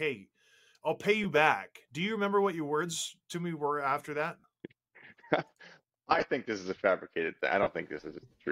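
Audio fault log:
1.23, 4.40 to 4.44, 6.10 to 6.23, and 7.62 to 7.67 s: lost LE Audio frames. Gaps of 15 to 45 ms, with the 6.1 s one broken into short bits, get patched by the LC3 decoder reusing the last spectrum with scrambled signs, so tones smear into brief noisy blurs.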